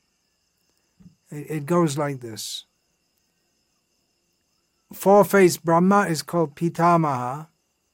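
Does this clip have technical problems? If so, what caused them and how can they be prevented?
No, nothing in this audio points to a technical problem, so there's nothing to trace back or guard against here.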